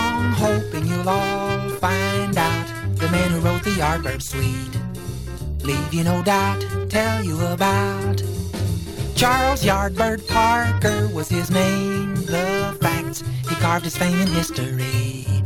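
No technical faults can be heard anywhere in this recording.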